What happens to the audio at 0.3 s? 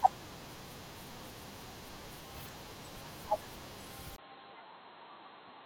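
Nothing goes wrong at 0.3 s: the speech there plays through intact, with no dropout, click, distortion or glitch.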